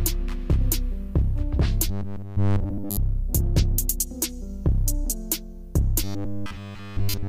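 From 1.89 to 2.98 s and again from 6.04 s to the end at 7.29 s, the audio turns into a rigid 100 Hz buzz, robotic sound from repeated short buffers, likely from a single 10 ms buffer replayed for the whole span while fresh audio was skipped.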